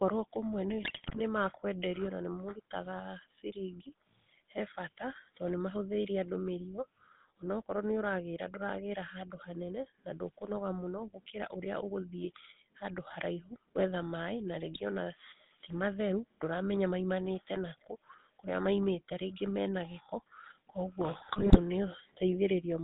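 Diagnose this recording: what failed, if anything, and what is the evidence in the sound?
The codec stage is the culprit for the constant coloration. The speech has the buzzy, gravelly roughness of the GSM full-rate codec from start to finish, and it's plainly audible. The band sits roughly between 150 Hz and 3.7 kHz, with nothing up top. The codec models the vocal tract as a filter and drives it with a coarse, regularly spaced pulse excitation, keeping only every third sample, which fits the 13 kbps full-rate coder.

On top of that there are network-side GSM bit errors in three bursts: 0.82 to 1.21 s, a brief one at 14.74 to 14.81 s, and 21.14 to 21.59 s. In each burst the speech breaks into squawks, pops and gargling. Corrupted bits are reaching the decoder's filter, pitch and gain parameters, so frames come out with a bent spectrum or a jumped level. The damage points to a few percent of bits flipped on a weak radio link.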